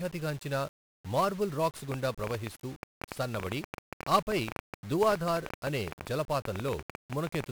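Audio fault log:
Throughout: 1-bit DFPWM compression. Each sample keeps only one bit steering an adaptive level, so heavy broadband quantisation noise makes the speech fuzzy and crackly, with treble buried in hiss, consistent with a low rate near 48 kbps.
1.92–7.45 s: train of clicks. Starting just after "గాంచిన మార్బుల్ రాక్స్", likely interference or a faulty connection injects similar pulses at an uneven pace of about 10 per second, some fifty in all. They peak around 15 dB above the speech and tick over it and through pauses.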